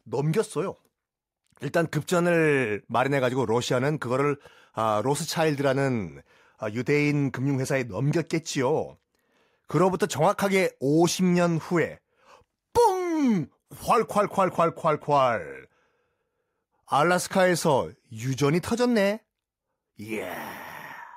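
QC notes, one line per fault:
No faults heard anywhere in the speech.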